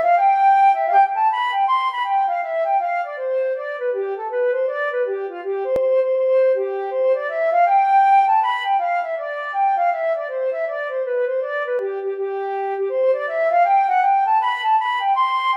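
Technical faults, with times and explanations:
5.76–5.80 s and 11.79–11.82 s, overlap between stream segments: two spots where a small chunk of sound just goes missing, roughly 38 ms the first time and 34 ms the second. They land about 6 s apart, which points to 6-second segments whose timestamps overlap at the joins. The player trims that overlap as if it were duplicated audio, but it wasn't, so the waveform jumps straight across the gap and you hear a tiny skip.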